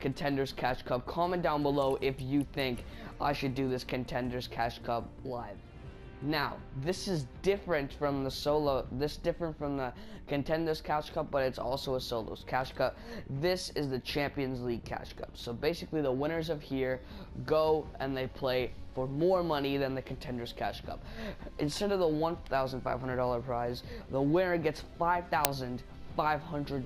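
Right at 25.45 s there's an uninitialised buffer: a tiny, very loud crack where leftover memory got played, which fits a 128-sample buffer.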